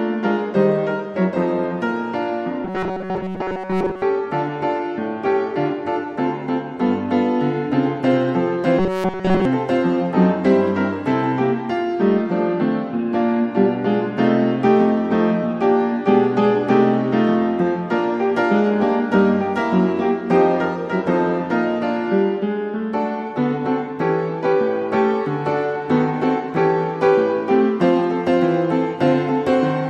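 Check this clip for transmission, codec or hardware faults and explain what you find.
Two stretches of robotic sound from repeated short buffers. The first runs from 2.65 to 4.02 s, the second from 8.79 to 9.45 s. Both carry a rigid, metallic buzz at 188 Hz. The likely cause is audio arriving too late, with the last 5.3 ms or so replayed to fill the gaps. Most of the first stretch is repeated material, and all of the second is. The sound keeps only its rough shape.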